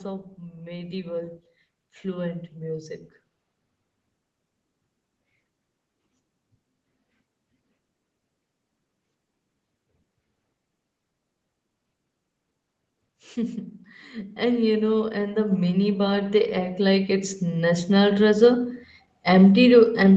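From 0.49 to 2.98 s the speech and background swell together by about 4 dB, and again from 14.12 to 18.41 s by about 10 dB: automatic gain rising, as the gain control lifted too-quiet input.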